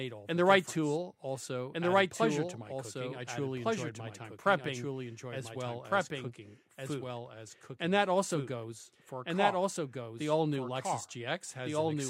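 From start to end, the speech carries a doubled audio track. A second, full-band copy trails the original by about one and a half seconds. It is roughly as loud as the first. The copy has no decay and no added room colour. So each phrase returns intact, overlapping whatever follows. The likely cause is the same signal reaching the mix twice, once through a slower path, or an edit leaving two copies out of step.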